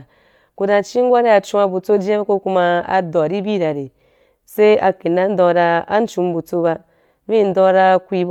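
Throughout, the speech has a grainy, breathy edge and a noise-filled top end, likely Bluetooth LC3 compression in 10 ms frames at about 48 kbps.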